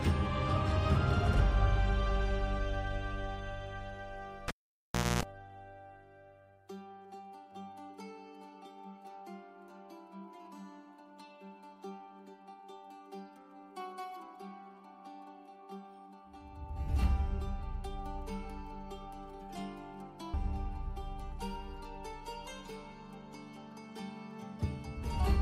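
At 4.48 s a cable is pulled and plugged in: a pop, about 0.70 s of near silence, a 0.26 s burst of 60 Hz mains buzz as the bare tip touches, then a second pop at 5.23 s. The buzz and paired pops set it apart from a plain dropout.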